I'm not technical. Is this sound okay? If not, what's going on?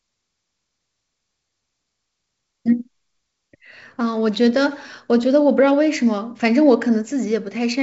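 Yes, this speech was carried over ordinary wideband phone coding called G.722, which passes sound up to about 7 kHz, and nothing in the recording points to a technical problem.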